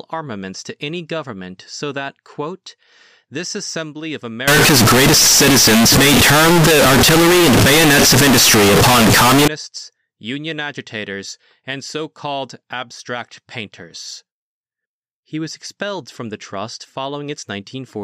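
Float read as integer, from 4.48 s to 9.48 s in this speech clip, just after "quote this assembly of": the audio abruptly turns into a very loud, harsh, nearly square waveform sitting at an almost fixed, high level, with background noise as loud as the talker, though pitch remains traceable. The likely cause is 32-bit float samples being read as 32-bit integers, so each sample's sign and exponent bits, not its actual level, decide the output value.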